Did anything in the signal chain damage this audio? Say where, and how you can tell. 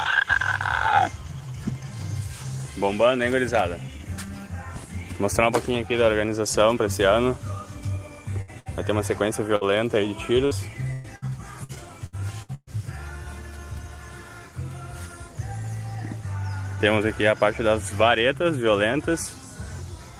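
Yes. Network stage: a burst of packet loss at 8.41, 8.60, 9.56, 10.45, 10.93 (120 ms) and 11.16 s, mostly 60 ms each. Each gap is filled by extending and fading the last sound, then skips ahead.

Repeated packet loss from 11.64 to 12.70 s: five concealed gaps, the longest about 120 ms, chop the sound into robotic fragments with 300 ms missing.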